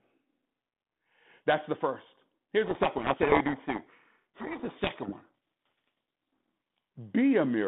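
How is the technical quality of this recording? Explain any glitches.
The recording has one serious glitch. It runs over a narrow telephone band of about 200 Hz to 3.5 kHz, which fits G.726 ADPCM at 32 kbit/s. From 2.64 to 6.78 s there is a codec payload misread. The decoder reads each G.726 code word with its bits in the wrong order. Every difference value it rebuilds is wrong, so its prediction drifts. The speech is buried in harsh, rasping distortion until sender and receiver agree on the packing again.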